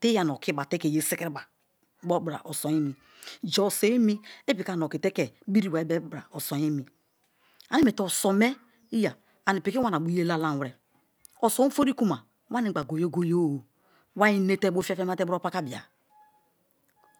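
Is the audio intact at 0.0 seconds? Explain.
Yes, the audio is intact at 0.0 seconds, with no fault present at that moment.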